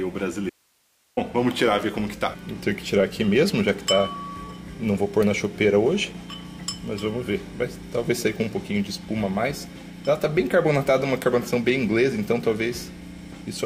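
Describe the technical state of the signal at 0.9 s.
At 0.9 s the sound has dropped to bare hiss, roughly 40 dB below its normal level: an audio dropout to a faint residue spanning 0.50–1.17 s, likely a brief loss of signal while the downstream path stayed live.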